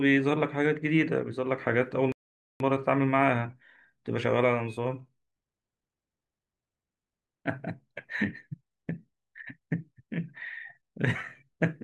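At 2.12 s the speech cuts out in mid-flow and the output stays silent until 2.60 s, a gap of about 0.48 s. This is a playback stall, most likely the player running short of buffered data, or its audio thread being held up, so nothing reached the output until it recovered.

From 2.60 s to 5.60 s the speech runs fast, at roughly 1.1 times normal speed, yet its pitch stays where it was. This is time-compressed catch-up. Having fallen behind during the stall, the player works through its backlog by removing small slices of audio and cross-fading across the joins. That shortens the material without shifting pitch.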